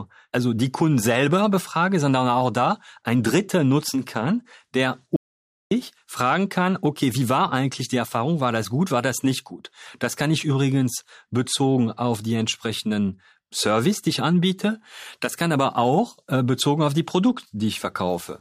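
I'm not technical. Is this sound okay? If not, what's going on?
No. At 5.16 seconds the speech stops dead, and it comes back at 5.71 seconds. That is an audio dropout to silence. For just over half a second there is nothing at all. You don't even hear the faint background of the room. Whatever was said in that gap is simply missing. The likely cause is that the input was briefly lost, say through a loose connection or an accidental mute, while recording carried on.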